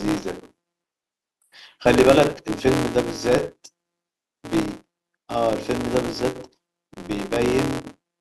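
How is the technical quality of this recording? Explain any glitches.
The recording is flawed by a steady buzz running through the whole clip. The fault is a filter restarted on every block. Throughout, the filter loses its memory at each block boundary and restarts from silence, leaving a small click every time. The ticks recur at 172 Hz, which fits a 256-sample buffer, and fuse into a buzz that tracks the speech level. A waveform shows evenly spaced spikes at block starts. A spectrogram shows horizontal lines at multiples of 172 Hz.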